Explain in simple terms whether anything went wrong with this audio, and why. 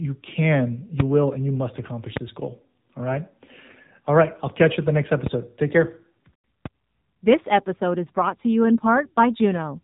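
Throughout, the speech went through an AMR narrowband mobile codec, like an old phone call. Everything above 3.8 kHz is gone, leaving it muffled, buzzy and synthetic.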